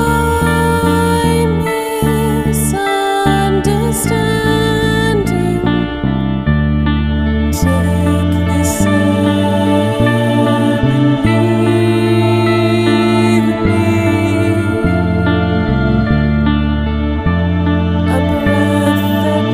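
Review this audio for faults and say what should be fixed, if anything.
Nothing here needs fixing, since no technical fault can be heard anywhere in the audio. There is no correction or preventive step to recommend.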